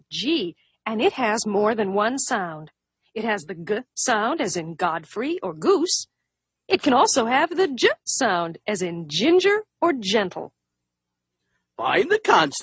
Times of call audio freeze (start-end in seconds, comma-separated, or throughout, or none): none